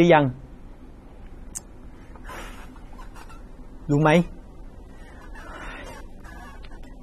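AAC compression damage runs through the whole of this speech recording and is plainly audible. Nothing reaches above about 13.7 kHz, and the remaining top end sounds dull and smeared, with a fizzy, warbling texture on sibilants and sustained sounds. The likely cause is AAC-LC encoding at a low bitrate, consistent with roughly 32 kbps. Starved of bits, the encoder cuts the upper band and quantises the rest coarsely.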